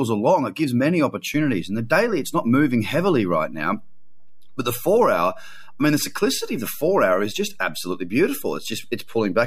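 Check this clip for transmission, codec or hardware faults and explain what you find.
One hardware fault is present in the speech. DC step at 1.34 s, just after "along it gives many": the waveform's zero line jumps by about -34 dBFS and holds to the end, heard as a single low thump.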